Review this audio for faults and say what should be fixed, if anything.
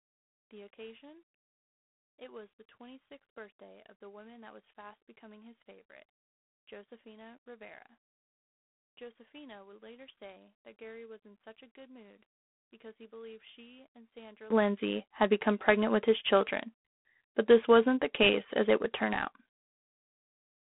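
G.726 ADPCM runs throughout the speech, with a harsh, rasping hiss that rises and falls with the speech level, which fits 24 kbit/s coding. The codec sends only coarse differences from its own prediction, and the band sits at roughly 150 Hz to 3.5 kHz, with nothing above 3.8 kHz. Passing the audio over a wideband link or at 32 kbit/s or higher would prevent this.

One channel inverted, from 0.0 to 14.50 s: the speech drops by about 26 dB to a faint residue. The likely cause is one stereo channel with reversed polarity, so the centred speech cancels when the channels sum to mono. Checking channel polarity with a correlation meter before any mono fold-down would prevent this.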